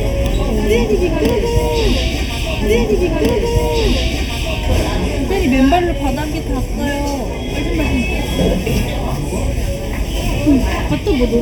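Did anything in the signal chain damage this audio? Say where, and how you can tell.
Yes, channel delay (comb filtering) throughout, at the mono fold-down: one side lags under half a millisecond, so regular notches from around 1.5 kHz make everything hollow.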